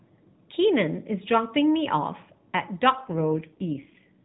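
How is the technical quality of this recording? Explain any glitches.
It's narrowband mobile speech with one clear glitch near the end. The whole thing runs through the AMR narrowband mobile codec, so nothing above 4 kHz gets through, and at the start the damage is light. At 2.96 s there's an AMR rate drop that lasts to 4.24 s. The network pushed the codec to a much lower mode to free bits for error protection, likely because of a weak radio link. The sound fits a step from 12.2 kbps down to 4.75 kbps. The bandwidth stays the same and nothing drops out, but with far fewer bits for the pulses in each frame, the speech turns noticeably buzzier, rougher and more synthetic until the clip ends.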